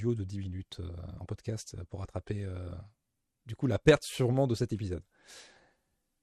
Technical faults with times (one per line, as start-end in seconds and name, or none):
0.00-6.22 MP2 compression
1.25-1.33 DAB burbling